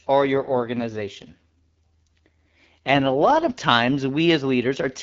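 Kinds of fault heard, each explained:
AMR rate drop: The codec falls back to a lower rate from about 0.34 to 3.68 s. The speech turns rough and raspy, which fits AMR-WB stepping down from 12.65 to roughly 6.6 kbit/s, then clears once the HD Voice link recovers.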